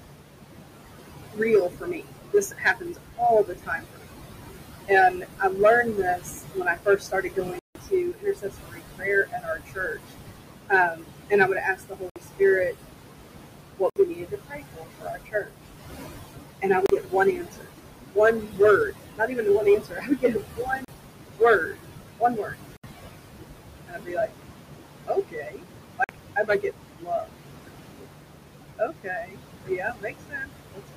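Hard clipping runs through the whole clip. The signal is driven about 8 dB past what a stage can pass, so around one sample in a hundred has its peak sliced flat. The flat tops add high harmonics, heard as crackle on peaks.

Noise suppressor artifacts are also constant. The suppressor pulls bands it judges to be steady noise down by about 21 dB, frame by frame. The room noise, about 7 dB below the speech, pumps down in pauses and swells under speech.

Speech cut by the noise suppressor occurs at 1.33–4.06, 4.88–10.1, 10.7–12.7, 13.8–15.5, 16.6–22.6, 23.9–24.3, 25.1–28.1 and 28.8–30.9 s. Here the suppressor mistakes soft consonants and word endings for noise and drops them by about 21–22 dB. They sound swallowed but not fully gone.

A Bluetooth stall, likely from interference emptying the headphone buffer, cuts the audio to complete silence at 7.59 s (161 ms), 12.10 s (61 ms), 13.90 s (65 ms), 16.86 s (34 ms), 20.85 s (37 ms), 22.77 s (71 ms) and 26.04 s (49 ms). 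Playback then resumes. Unlike the suppressor dips, these gaps are total.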